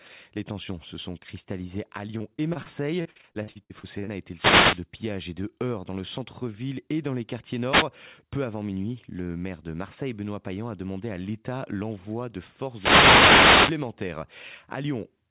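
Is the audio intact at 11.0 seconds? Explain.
Yes, the speech at 11.0 seconds is intact with no fault, and it carries the same band limit as the rest of the call path, with nothing above 4 kHz, which fits a G.711 mu-law telephone codec.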